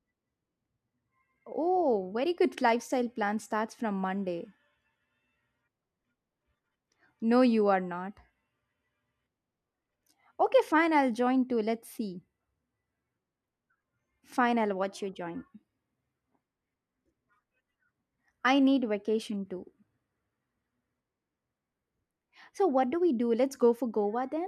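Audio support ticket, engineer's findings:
Speech runs fast and sharp, 14.83 to 17.21 s, then snaps back. Rate up 5.28%, pitch up 89 cents. Drift correction step, likely clock sync rebalancing its buffer.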